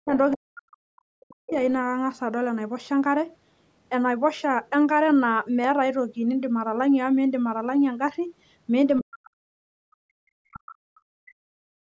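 From the very start to 0.14 s, and again from 0.34 to 1.6 s, the speech sinks sharply, by roughly 40 dB at its deepest, so that parts of it nearly vanish before it recovers. This is likely speech suppressed in double talk. With both ends talking at once, the echo canceller could not separate the local talker from the loudspeaker echo, so it turned everything down together.

Overlapping the end of that stretch, from 1.5 to 1.72 s, a faint second voice slips through for a moment, about 20 dB below the talker. This is the other side's voice leaking through, likely because the echo canceller left a trace of the loudspeaker playback in the microphone signal rather than removing it completely.

From 9.0 to 11.37 s the talker is pushed down again, with drops of around 40 dB adding up to about two seconds of choked or missing speech. It is the same double-talk suppression, likely caused by both sides speaking at once again, which left the canceller unable to tell the talker from the echo.

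From 11.65 s to the end, the room sound behind the speech falls away by about 39 dB for roughly 0.3 s. This is background gated by the echo canceller. While the loudspeaker was playing, the canceller clamped the microphone down hard, cutting the ambience along with any echo it expected to find.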